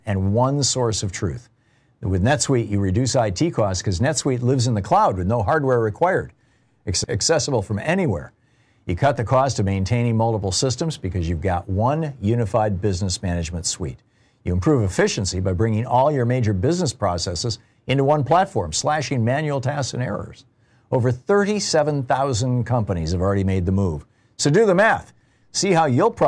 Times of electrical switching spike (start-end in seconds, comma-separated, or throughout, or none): none